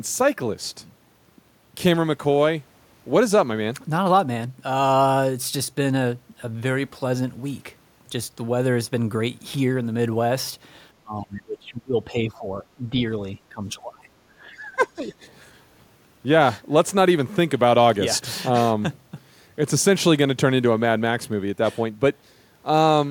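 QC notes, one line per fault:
11.02–14.07 s and 14.46–15.13 s, speech suppressed in double talk. The speech dips across both spans. It drops by about 20 dB at worst in the first span, for around two seconds in total, and by about 15 dB in the second, for roughly half a second. This is likely an echo canceller treating the talker as loudspeaker echo while the far side spoke, and attenuating both.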